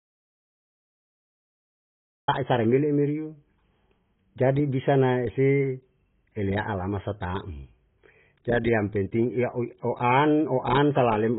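The clip opens in silence, with no room tone at all, until the speech comes in mid-flow at 2.28 s with "sa re mele' merio". This is an audio dropout to silence that was already under way when the recording began. The likely cause is that the input was lost, through a disconnected device, a failed link or a mute, while the recorder kept writing silence. Whatever came before that point is gone.

Throughout the clip, the speech sounds dull, muffled and smeared, with a watery, warbling texture on sustained sounds and fizzy, blurred sibilants. Nothing is audible above 3.8 kHz. This points to heavy AAC compression, likely AAC-LC at a very low bitrate around 16 kbps. The encoder drops the upper band entirely and coarsely quantises what remains against its hearing model, leaving spectral holes that produce the swirling artefacts.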